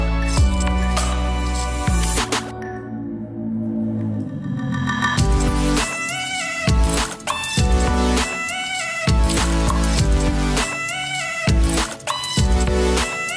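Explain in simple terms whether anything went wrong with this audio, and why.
Nothing went wrong here; no faults can be heard.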